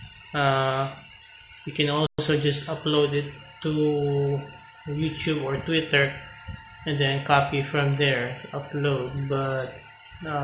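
A playback stall, likely the player running short of data, silences the output from 2.07 to 2.19 s, a 120 ms gap before the sound resumes.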